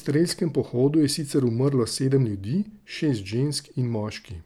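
No technical faults can be heard anywhere in this speech recording. The audio stays continuous and steady from its first moment to its last.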